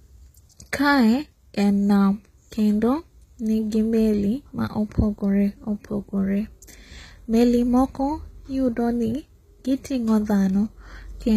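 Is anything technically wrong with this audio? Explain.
Yes. HE-AAC compression damage runs through the whole speech clip. The treble is likely rebuilt by spectral band replication, copied upward from lower bands. Sibilants sound gritty and metallic. Nothing reaches above 14.9 kHz, which fits a bitrate around 20 kbps.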